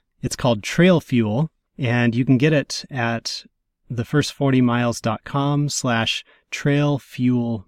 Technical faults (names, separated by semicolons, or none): none